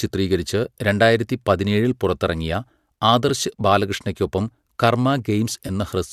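At 3.29 s and 5.67 to 5.70 s, AAC frames went missing and the likely low-delay decoder patched them from the last good spectrum. This AAC frame loss with concealment leaves brief smeared, phasey blips in the speech.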